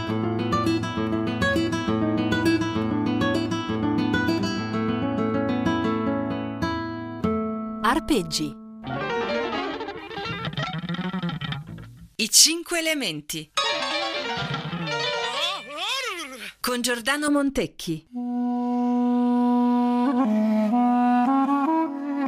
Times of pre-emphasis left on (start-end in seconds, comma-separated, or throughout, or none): 9.99-17.28